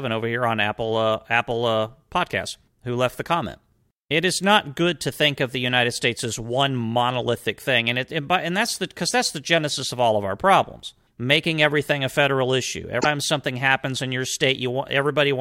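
At 12.97 to 13.05 s, between "everything a federal issue" and "something happens in", damaged data in the compressed stream makes the decoder lose sync, producing a brief glitch.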